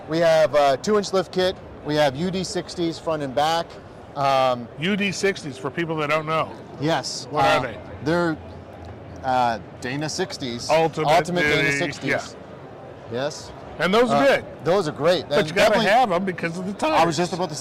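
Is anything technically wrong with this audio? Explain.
No, nothing technically wrong stood out on listening to this audio.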